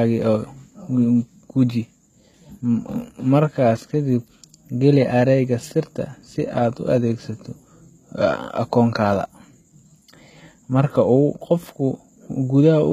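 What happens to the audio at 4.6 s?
HE-AAC compression is at work at 4.6 s, as it is across the whole speech clip, with plainly audible damage. The sound is likely passed through an HE-AAC v2 encoder at a very low rate, consistent with about 20 kbps. Only the lower band is actually coded; the treble is rebuilt by copying lower bands upward under a coarse envelope, so sibilants come out gritty and lispy, and nothing is left above 14.9 kHz.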